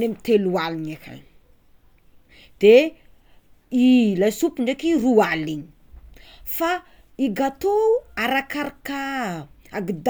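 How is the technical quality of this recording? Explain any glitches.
Listening through this recording, nothing stood out as a technical problem, and there are no glitches to explain.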